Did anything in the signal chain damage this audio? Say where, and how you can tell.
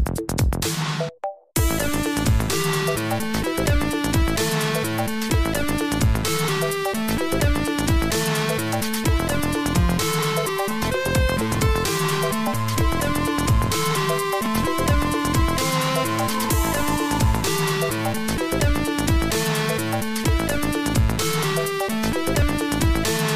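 Yes, there is overlap between stream segments at 6.48, 10.49, 12.47, 14.46 and 22.42 s, which points to the streaming and playback stage. Each event is a tiny skip or click landing on a 2-second segment boundary. Where segment timestamps overlapped, the player discarded 7 to 17 ms of audio that was never duplicated, so the waveform jumps.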